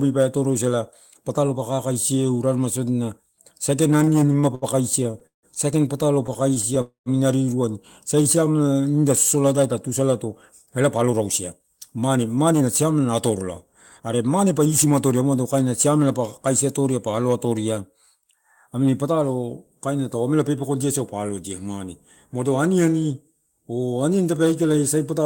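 Between 3.97 and 4.65 s the speech drags and stutters through seven brief hangs, the longest 70 ms, with 164 ms of held-over sound. This is repeated stalls (stutter): packets arrived late, the jitter buffer kept running dry, and the receiver stretched the last sound each time. It recurs from 5.04 to 5.46 s with four hangs, one lasting 163 ms, so half that stretch is filler. From 6.27 to 6.78 s there are five shorter hitches of 15 ms at most.

Right after, at 6.81 s, the sound hangs as a fading buzz that drops into about 120 ms of silence, then picks up where it left off at 7.09 s, 245 ms late. This call audio freeze was likely caused by packets held up in transit, which emptied the jitter buffer.

From 8.15 to 8.93 s, just before "sosola lai tatusalato", the speech slows to 86% of normal speed at unchanged pitch, with drawn-out sounds. This is a jitter buffer slow-down: the receiver repeated single pitch periods to add 116 ms and rebuild its reserve.

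After "sosola lai tatusalato", from 10.66 to 15.22 s, the speech runs about 9% fast and sounds hurried, though the pitch stays put. This is a jitter buffer speed-up: with too much audio queued, the receiver trimmed short pitch-period pieces, cutting roughly 0.4 s of delay.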